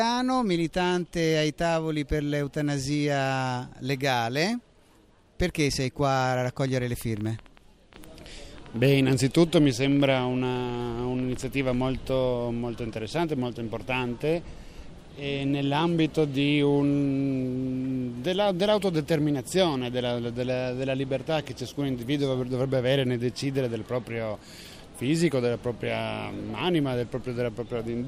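From 5.73 to 11.75 s, a train of clicks, likely interference, ticks about 7.8 times per second, irregularly spaced, near signal level, with much the same shape unlike random crackle.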